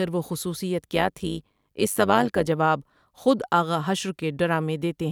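Overlap-add ripple runs from 0.95 to 2.49 s. The speech was split into windowed frames and rejoined with overlaps whose gains fail to sum evenly, so the level swings by about 11 dB once per frame, roughly 100 times a second, producing a metallic buzz with extra tones around the voice.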